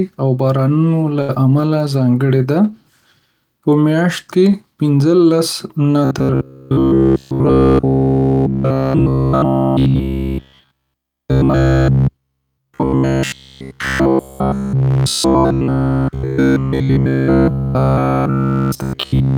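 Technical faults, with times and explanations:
1.21–1.30 s, short stall from a late packet: Just after "او بارانونو له" a packet was not there when it was due, so the jitter buffer ran dry. The receiver held the last sound for 72 ms until the packet turned up, then carried on from the same point. Nothing is lost, but that sound hangs on too long with a faint buzzy dip, and playback ends up 72 ms further behind.
1.35 s, short concealed packet loss: Moments later, still after "او بارانونو له", about 30 ms of audio never reached the decoder in time. The receiver bridged the gap with about 7 ms of synthesized continuation, extending the previous sound's pitch or shaped noise, then blended back into real audio. The result is a quick smear or wobble, and because more was lost than filled, playback jumps ahead by roughly 20 ms.
6.05 s to the end, robotic sound from repeated short buffers: From "لس نه" onward the sound becomes a rigid, metallic buzz at 66.7 Hz that still loosely follows the speech contour. 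New audio is arriving too rarely, so the software keeps looping the last short chunk while the real audio is skipped, essentially all of it replaced by repeats. The 66.7 Hz buzz points to a repeat period of 15 ms, likely a 15 ms buffer being replayed.
14.73–15.68 s, jitter buffer speed-up: Within the robotic stretch, the buffer held more audio than its target, so the receiver trimmed short pitch-period slices many times in a row, removing around 70 ms in total. The audio plays at 107% speed with unchanged pitch, which makes this stretch sound slightly hurried and rushed.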